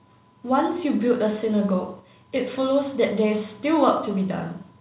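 No technical faults are audible.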